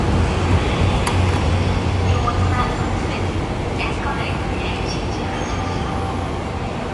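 Throughout the clip, the audio sounds watery and swirling, with nothing above 11.4 kHz. That is likely MP3 compression at a bitrate around 48 kbps. A spectrogram shows a hard ceiling there and flickering gaps where weak frequency lines drop out between frames.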